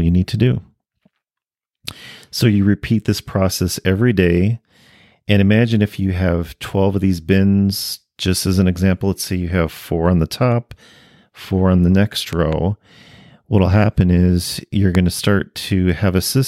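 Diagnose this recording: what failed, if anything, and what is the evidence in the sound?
Loud pops, likely voltage transients in the analogue wiring: two after "four on the next" between 12.33 and 12.55 s, a few dB above the speech, and one after "happen is you're" at 14.95 s, about 10 dB above. Each is a narrow waveform spike and a broadband vertical spectrogram stripe, with speech continuing beneath.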